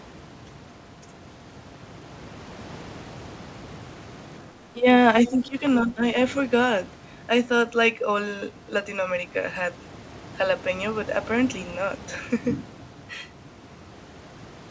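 From 4.49 to 4.89 s, 5.28 to 5.63 s and 5.81 to 6.04 s the speech dips by roughly 10 to 15 dB: speech suppressed in double talk, likely from an echo canceller ducking both sides.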